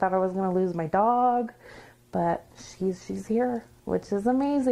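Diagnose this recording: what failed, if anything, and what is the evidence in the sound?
A call bitrate drop at the codec stage: from 1.49 to 3.39 s the sound turns coarse and dulled, with highs missing for about 1.8 s, which fits the encoder falling from roughly 96 to 17 kbps. The degradation is continuous, with no gaps or stutters, unlike packet loss.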